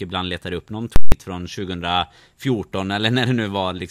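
Right after "ibland letar upp någon", at 0.96 s, there's a nasty case of invalid numbers at full scale. Some calculation blew up to infinite or invalid values that got pinned at one extreme value for about 160 ms, so you get a loud pop at 0.96 s, dead silence, then another pop at 1.12 s.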